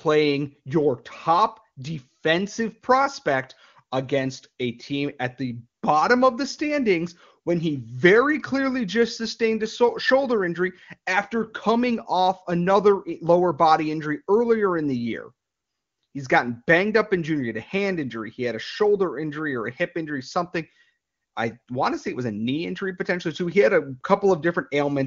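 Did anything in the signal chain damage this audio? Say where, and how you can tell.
No, nothing damaged this audio.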